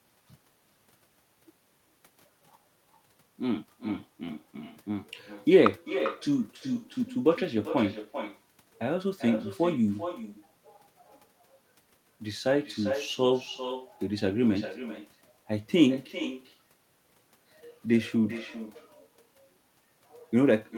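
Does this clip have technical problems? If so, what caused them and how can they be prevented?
Yes. Echo with no canceller runs throughout: the far end's loudspeaker feeds its microphone, returning the speech roughly 0.4 s later, about 11 dB quieter and thinner. Enabling acoustic echo cancellation or having the far end wear headphones prevents it.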